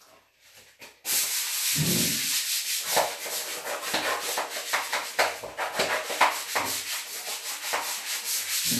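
Nothing's wrong here: it's a short recording of everyday sounds, and there's no technical fault to point to anywhere in it.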